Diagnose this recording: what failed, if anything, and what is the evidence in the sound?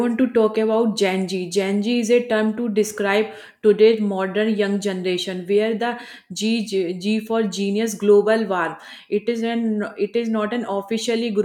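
Nothing failed: at no point along the chain, from capture through conversion to playback, does the sound give evidence of a fault.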